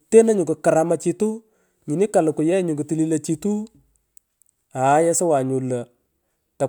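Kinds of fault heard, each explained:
No faults can be heard in this speech recording.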